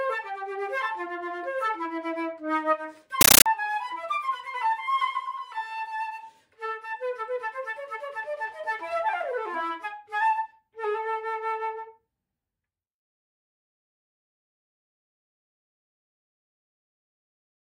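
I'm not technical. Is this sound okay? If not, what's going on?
No. From 3.21 to 3.46 s the sound is replaced by very loud, harsh static that chatters in a steady rhythm. That is a compressed stream played as audio: the rhythm, about 31 short bursts a second, each around 13 ms with silence between, points to a Dolby Digital stream that was never decoded and was played as if it were ordinary sound. A random crackle or noise burst has no such even, machine-like beat.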